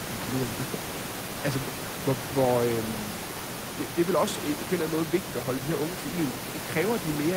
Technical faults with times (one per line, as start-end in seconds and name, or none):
none